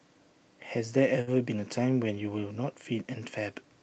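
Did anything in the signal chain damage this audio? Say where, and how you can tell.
Yes. A short stall from a late packet at 1.21 to 1.29 s in the network and jitter-buffer stage. The buffer ran dry, so the receiver stretched the last sound for about 58 ms and then resumed where it left off. Nothing is lost, but playback now runs 58 ms later.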